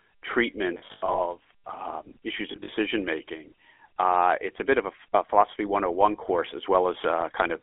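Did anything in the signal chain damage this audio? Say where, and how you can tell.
Yes. At the codec stage, the whole clip has the buzzy, gravelly roughness of the GSM full-rate codec. It's squeezed into a 300 Hz to 3.4 kHz band, which fits 13 kbps pulse-excited coding.

On the network, there are lost GSM frames at 0.74–1.19 s, before "um issues", and at 2.52–2.69 s, before "making uh it's a". You hear a metallic ring as the decoder repeats the last good frame.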